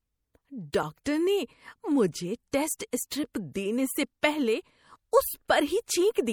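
Speech, carrying plainly audible MP3 compression throughout, with a watery, unstable texture that points to a low-rate encode, roughly what a 64 kbps MP3 produces. This is most likely the coder running short of bits, so weaker frequency lines are dropped and return from frame to frame, and the fine detail of the voice smears rather than holding steady, even though the band itself still reaches about 20.5 kHz. The same coding also produces pre-echo at five points: 0.72 s, 1.04 to 1.06 s just before "نے مجھے", 2.52 s just after "نے مجھے", 2.78 to 2.80 s, and 2.91 to 2.93 s just before "اسٹرپ دینے سے پہلے". Each time, a brief hiss of 14 to 22 ms runs ahead of a sharp onset. The encoder spreads the noise budget set by the loud attack across its whole block, including the quiet moment before it, so that noise becomes audible and the attack itself sounds softened.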